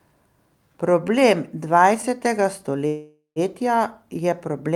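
At 2.87 s the speech stops and the last sound is stretched into a decaying buzz or hiss, dropping to silence for its final 120 ms. Speech resumes at 3.39 s. This is a call audio freeze, likely from delayed packets draining the jitter buffer. The receiver filled about 0.49 s, and on resumption nothing is lost; speech continues exactly where it halted, so everything afterward runs 0.49 s later than before.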